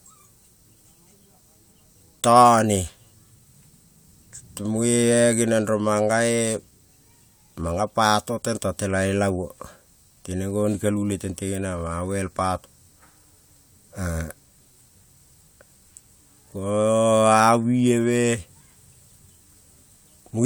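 Speech recording, with no audible technical faults.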